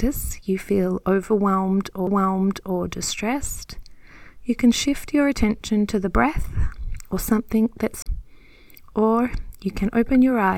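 Two CD skips interrupt the audio, at 2.07 s and from 8.02 to 8.06 s. The first mutes for only a few milliseconds, the second for about 40 ms. Each time the laser has jumped onto a different turn of the disc's spiral, so after a brief tick playback resumes from another point. That displacement separates a skip from an ordinary dropout, where the sound picks up exactly where it stopped.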